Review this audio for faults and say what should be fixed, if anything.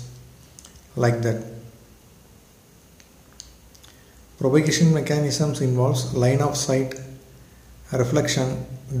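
No faults found; nothing needs fixing.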